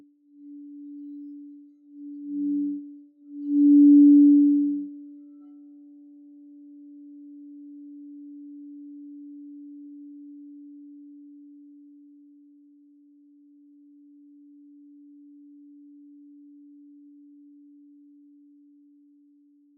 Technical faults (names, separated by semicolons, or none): noise suppressor applied to music or sounds